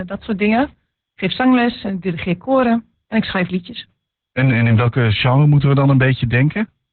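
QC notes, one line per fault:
Throughout: Opus voice compression. The encoder is running its SILK speech coder in narrowband at a starved rate, consistent with about 8 kbps, cutting everything above 4.3 kHz and coding the excitation coarsely, so the speech sounds muffled, hoarse and slightly robotic.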